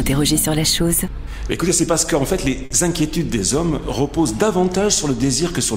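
At 2.65 s a short stall from a late packet stretches the last sound for 50 ms, nothing lost; spectrograms show smeared, repeated frames and waveforms a held segment with a slight buzz or dip.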